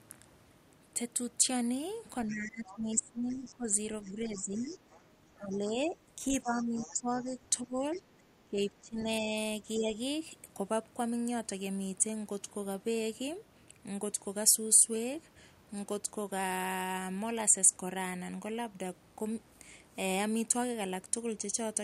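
Speech, and from 2.26 to 9.96 s the talker gets speech suppressed in double talk, dipping by up to about 15 dB for around five seconds in total, likely the echo canceller ducking both sides at once. Meanwhile the other side's voice is leaking through at 2.28 to 5.58 s and 6.59 to 7.99 s, sitting roughly 20 dB under the talker, likely loudspeaker echo the canceller didn't fully remove.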